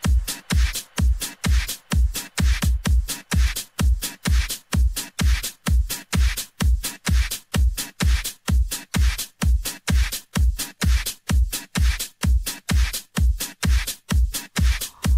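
No faults detected anywhere in the recording.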